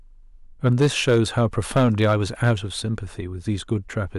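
Hard clipping runs from 0.66 to 2.52 s: the speech is driven about 7 dB past what the signal path can pass, so peaks flatten into harsh, buzzy distortion.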